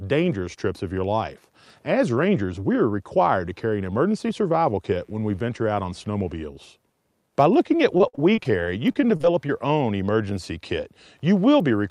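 From 4.86 to 6.36 s, switching spikes from a dimmer, rectifier or missing shield inject 60 Hz harmonics, producing mains buzz, a faint, steady raspy tone well beneath the speech. Repeated packet loss then strikes twice, from 7.97 to 8.61 s and 8.93 to 9.51 s. Holes of up to 56 ms are patched by stretching the previous sound, giving choppy, robotic speech with fragments missing.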